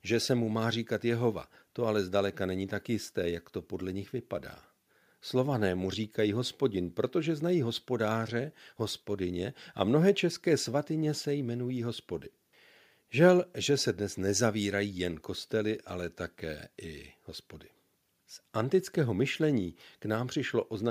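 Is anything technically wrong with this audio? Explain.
No, nothing technically wrong can be heard in this speech recording. There are no faults to report.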